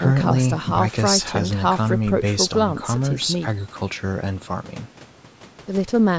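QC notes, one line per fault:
No faults found in this speech clip. It has been through a call's microphone processing, so nothing is heard above 8 kHz and the lowest bass is trimmed, as expected for that path.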